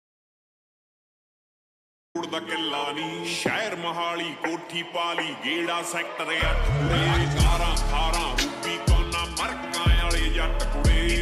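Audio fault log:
0.00–2.15 s, audio dropout to silence: the clip opens in complete silence with no room tone, already under way from the first sample, then sound arrives abruptly mid-flow at 2.15 s. The likely cause is a lost input while the recorder kept writing silence.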